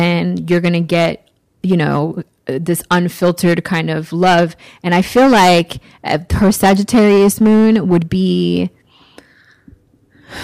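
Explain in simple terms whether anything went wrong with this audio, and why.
Yes, something went wrong: the speech has hard clipping from start to finish. The signal was pushed well past what the recording chain could handle, so the loudest moments got their peaks sliced off flat, roughly one in every twenty samples of the waveform. Those flattened tops add a gritty, buzzy edge, so each stressed or louder syllable comes out with a harsh fuzz instead of sounding clean.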